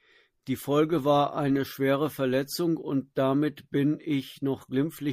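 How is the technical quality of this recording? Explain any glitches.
The recording has plainly audible lossy-codec damage running through the whole speech clip, most likely from MP3 compression at a low bitrate, fitting around 64 kbps. Short of bits, the encoder cuts off the treble and discards quieter frequency components, which drop in and out from frame to frame. The speech therefore sounds dull at the top and watery or swirly, with metallic chirping on s sounds and softened, smeared consonant attacks.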